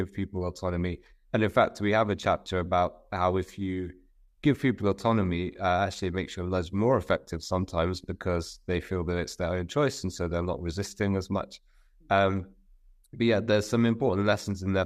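No technical faults are audible.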